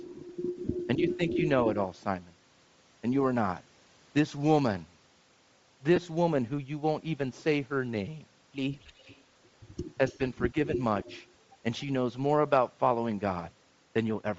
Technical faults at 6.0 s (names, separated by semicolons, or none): Bluetooth LC3 compression; lost LE Audio frames